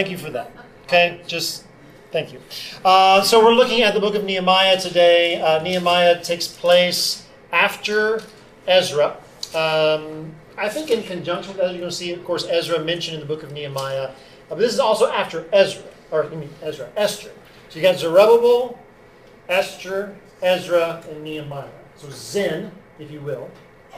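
From 16.41 s to the end, the audio carries sample clock jitter. The converter's timing wanders by roughly 10 microseconds, so each sample lands slightly off its proper instant, leaving an error around 25 dB below the signal. Unlike steady background hiss, this roughness tracks the material: it swells on loud, bright, fast-changing passages, where the waveform slopes steeply, and drops away entirely in quiet gaps, because a flat signal gives the timing error nothing to act on.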